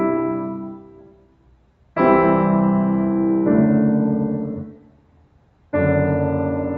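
The whole music clip has a speech noise suppressor applied to music or sounds. It treats sustained parts as noise, so the level swings by around 10 dB, giving a pumping, fluttery feel on top of the call path's 8 kHz top end. Then the sound is cut by the noise suppressor, from 0.74 to 1.96 s and again from 4.56 to 5.73 s. Each time, roughly a second of held material sinks by up to about 12 dB, so it thins out and its tail fades early.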